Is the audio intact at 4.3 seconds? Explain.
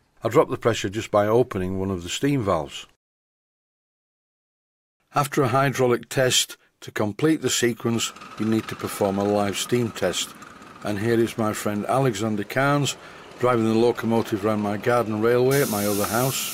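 Yes, the audio is intact at 4.3 seconds, with no dropout, click, distortion or other fault at that moment.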